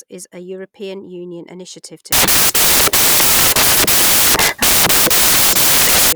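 From 2.12 s to 6.12 s, the speech gives way to loud, harsh broadband noise. This is a case of samples built from the wrong bytes. The reader assembles each sample incorrectly, whether off by one byte, with the byte order swapped, or with the wrong alignment. The rapidly changing low bits end up as the dominant part of every value. The result is a harsh broadband hiss.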